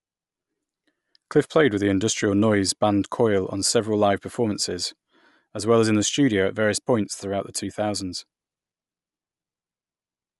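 The audio was most likely squeezed through Bluetooth LC3 compression, the LE Audio transform codec, for the whole clip. The damage is plainly audible and points to a setting near 48 kbps with 10 ms frames. At that rate the encoder drops much of the upper spectrum and patches it with noise, so the speech takes on a breathy, grainy edge, and nothing at all comes through above 11.5 kHz.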